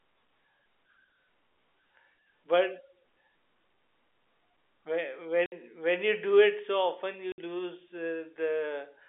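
A speech clip carried over a narrowband G.711-style telephone line, and it has two bursts of packet loss filled with silence: 60 ms holes at 5.46 s, right before "when you do it", and at 7.32 s, just after "often you". Each gap has hard edges and sounds like two 30 ms packets dropped and replaced with nothing.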